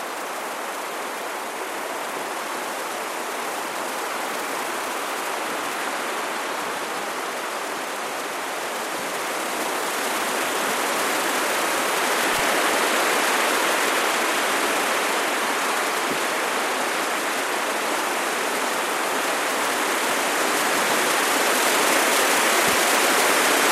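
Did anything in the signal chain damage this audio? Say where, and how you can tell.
Yes: garbled flutters at 12.33–12.39 s and 22.63–22.75 s show frames out of order, where the network swapped neighbouring 24 ms and 48 ms blocks.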